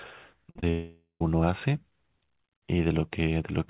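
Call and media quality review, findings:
Repeated packet loss, robotic sound, 0.44 to 0.63 s. Five short gaps, longest 46 ms. Receiver concealment stretches the last audio into each hole. About half the span is patched this way. Result: choppy speech with pieces missing.

Long network dropout, 0.70 to 1.21 s. Concealment buzz fills about 500 ms and fades. Then about 140 ms of silence. Roughly half a second of speech never returns. Likely cause: an incoming-stream outage. Speech is band-limited to 4 kHz, consistent with G.711.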